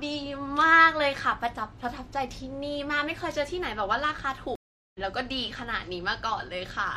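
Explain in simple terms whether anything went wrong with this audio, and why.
The connection carrying this speech dropped and the player had to reconnect, a fault called a stream reconnect. From 4.55 s to 4.99 s the sound cuts out for about 0.39 s while the player rejoins the stream and starts decoding again from scratch. When the speech comes back, it has jumped ahead by roughly 0.4 s, so the part that would have played during the gap is simply missing.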